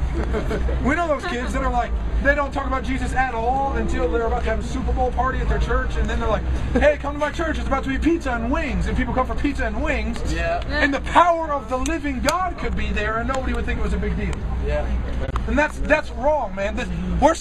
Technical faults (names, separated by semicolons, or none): corrupt frame concealed